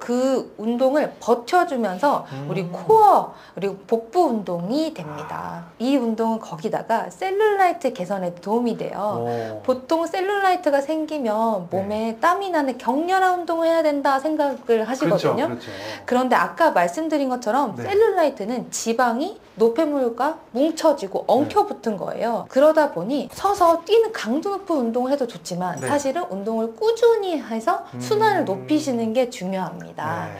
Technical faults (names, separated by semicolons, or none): sample clock jitter